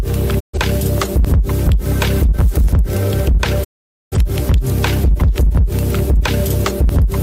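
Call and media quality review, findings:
Hard clipping, whole clip: flattened loud peaks, overdriven by about 4 dB, roughly a tenth of samples flattened at a gain stage or converter. Flat tops give bright upper harmonics, not the rounded warmth of soft saturation.

Digital broadcast dropout, 0.39–0.58 s: short fade to silence, fitting a few lost receiver frames. Muted until valid frames returned.

Digital broadcast dropout, 3.63–4.17 s: longer hole, about 0.47 s missing, 20 ms fades. Clean muting, unlike the smeared fill of packet-loss concealment.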